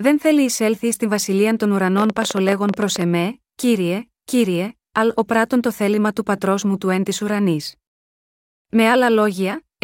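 Speech, with a train of clicks running from 1.98 s to 3.02 s. For about a second, a burst of roughly fifteen sharp pulses of much the same shape ticks over the audio at an uneven pace, averaging 15.5 clicks per second. Their peaks rise to around ten dB above the speech, so they stand out clearly. The cause is likely electrical interference from nearby equipment or a faulty connection or power supply injecting repeated pulses into the signal path.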